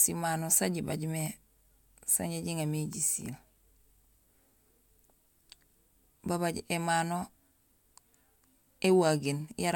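No technical faults are audible anywhere in the recording.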